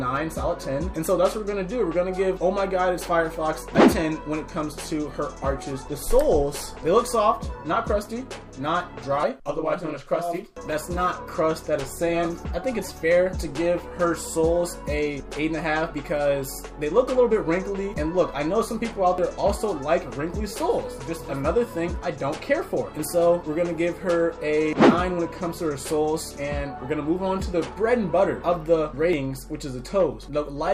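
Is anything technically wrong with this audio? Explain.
Yes, there are two abrupt skips at 19.18 s and 29.13 s, about 10 s apart, each dropping roughly 50 ms. That's likely audio missing between chunks, lost at a 10 s chunk boundary, with the ends butted together.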